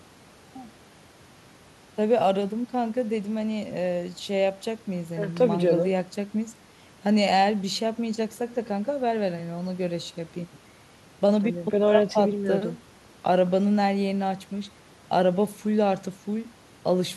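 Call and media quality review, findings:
No findings in this call and media quality review.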